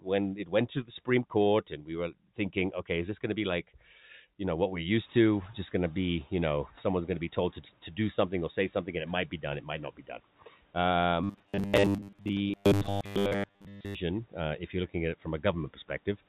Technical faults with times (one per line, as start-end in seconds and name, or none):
0.36-0.53 speech cut by the noise suppressor
0.83-1.08 speech cut by the noise suppressor
1.70-1.90 speech cut by the noise suppressor
4.96-7.61 noise suppressor catching up
11.24-13.95 robotic sound from repeated short buffers